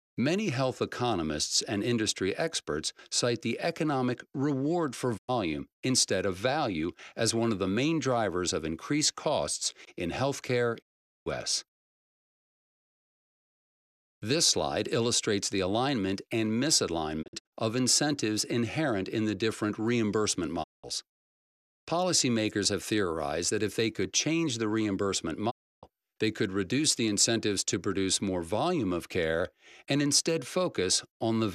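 Digital broadcast dropouts mute the audio at 5.17, 10.81, 17.21, 20.62 and 25.49 s. The receiver lost valid frames and silenced itself behind 20 ms fades, leaving holes of 96 to 432 ms. At 17.21 s, the holes scatter over 288 ms. The waveform and spectrogram show clean, blank vertical gaps.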